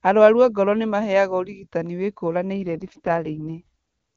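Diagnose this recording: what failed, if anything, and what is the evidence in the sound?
The network forced an AMR rate drop between 2.62 s and 3.62 s. The link evidently degraded, so the network ordered the AMR-WB encoder down from the top mode, which the clean HD Voice sound before 2.62 s suggests is around 23.85 kbit/s, to a much lower rate, consistent with 6.6 kbit/s. The bandwidth holds with no gap, but the speech turns raspy and synthetic for that second, then returns to clear wideband quality once the higher rate is restored.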